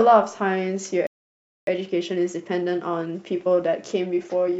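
At 1.07 s the speech cuts off mid-flow and the output goes silent for about 0.61 s, resuming at 1.67 s. This is a playback stall, likely caused by the player running out of buffered data or its audio thread being blocked until it could recover.

From 1.67 s to the end, the speech sounds hurried but keeps its normal pitch. This is time-compressed catch-up: to work off the backlog from the stall, the player cuts out small pieces and cross-fades the joins, running about 1.15 times faster than real time.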